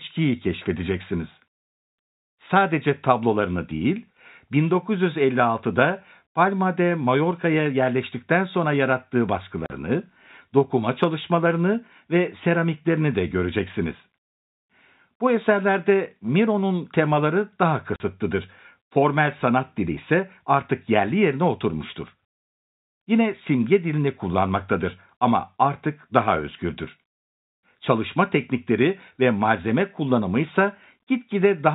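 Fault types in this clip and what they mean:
Packet loss filled with silence: lost packets were replaced by silence, leaving two 40 ms holes, each fitting two 20 ms packets, after "yerleştikten sonra yarattığı" and "temaları daha", with hard edges.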